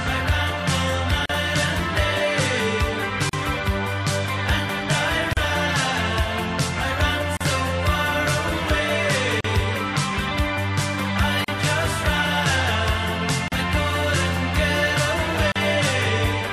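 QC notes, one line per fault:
1.26, 3.29, 5.33, 7.37, 9.41, 11.44, 13.48 and 15.52 s: gap at a join of encoded pieces, a hole of about 38 ms each time, roughly every 2 s. The audio looks like it was encoded in short chunks and butted together untrimmed, so each encoder's start-up delay and last-frame padding leave a brief silence. You hear a dropout with smeared edges, then the sound picks up right where it stopped.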